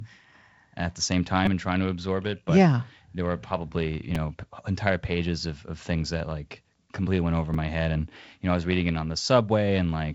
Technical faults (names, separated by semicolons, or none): repeated buffer